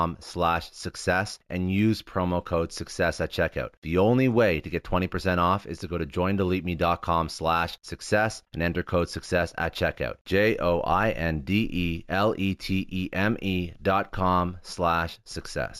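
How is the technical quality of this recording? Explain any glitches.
The recording has one fault running through the whole clip: imaging from linear upsampling.

From start to finish, the sample rate was raised using straight-line interpolation, which is a poor anti-imaging filter. The sound points to a 16 kHz source brought up to 48 kHz. The top of the original band is dulled, and a mirrored copy of the spectrum sits between 8 kHz and 16 kHz, roughly 30 dB below the speech. This adds a faint metallic shimmer to sibilants.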